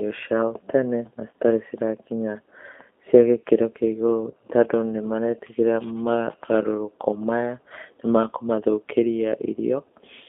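Throughout the clip the speech sounds narrow, slightly rough and synthetic, confined to a telephone band of roughly 250 Hz to 3.5 kHz. This is the G.729 codec (the G.729A variant), which fits an 8 kbit/s stream. It rebuilds each 10 ms frame from a vocal tract filter, a pitch predictor and a few pulses, so the coding damage is plainly audible.

From 4.31 to 4.34 s, just before "tondũ nĩ maretigĩra mogarũrũku", the sound briefly stretches into a buzzy tone or coloured noise that fades. This is VoIP packet loss concealed by the speech codec, consistent with one lost 20 ms packet. The decoder extended its last pitch and filter at falling gain, and the voice stays weak or distorted for tens of milliseconds or more after the packets return.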